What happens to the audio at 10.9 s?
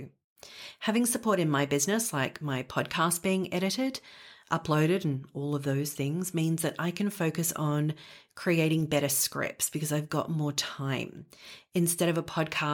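Nothing goes wrong at 10.9 s; the speech carries on intact through that moment, with no dropout, click or distortion.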